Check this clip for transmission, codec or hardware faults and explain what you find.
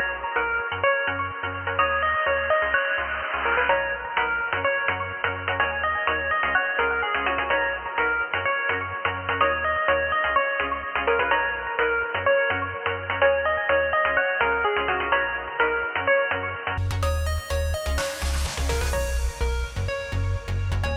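One fault is present: the input likely switched to a poorer device, with the recording running through a narrower-band microphone or headset profile until 16.78 s. Nothing above 3 kHz passes, so the sound is dull and boxy, with a faint added noise floor, then opens up with no gap or level jump.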